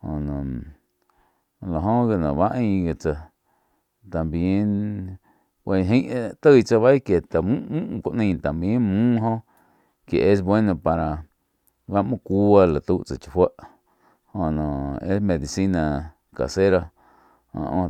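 No technical faults are audible.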